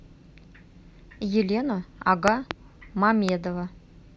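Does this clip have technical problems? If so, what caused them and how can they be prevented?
Yes. The speech has loud pops. Two sharp pops arrive in quick succession between 2.28 and 2.53 s, peaking roughly 20 dB above the speech. A single weaker pop, roughly 15 dB above the speech, follows at 3.29 to 3.31 s. The speech continues underneath both. The likely cause is a sudden voltage pulse added to the signal, from a loose connector, a switch, static or a driver glitch. To prevent this, secure the cables, avoid switching equipment while recording, and ground everything properly.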